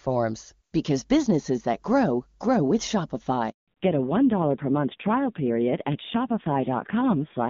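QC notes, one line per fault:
3.50 to 3.68 s, handover gap: the call switches networks and nothing arrives for about 180 ms, so the sound drops out quickly and goes silent until the new link starts.
3.68 s to the end, fallback to narrowband: clean HD Voice before this point, then everything above 4 kHz disappears, leaving a dull, rough sound that suggests a low-rate narrowband codec.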